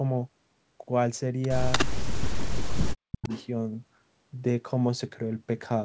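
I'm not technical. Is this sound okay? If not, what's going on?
No. There are two problems, both typical of a phone or video call.

The first is an echo leak. From 1.72 to 1.86 s, and again from 3.23 to 3.47 s, you hear a second copy of the speech arriving 300 milliseconds late. The first echo is about as loud as the speech itself. The second is much quieter. The likely cause is someone using a loudspeaker. Their microphone caught the call audio, and the echo canceller didn't remove all of it, so it came back.

The second is speech suppressed in double talk. From 1.91 to 3.3 s, the speech keeps dipping. At its worst it nearly vanishes. Altogether this lasts about one and a half seconds. This likely happened because both sides spoke at once. The echo canceller couldn't tell the talker from the echo, so it turned everything down.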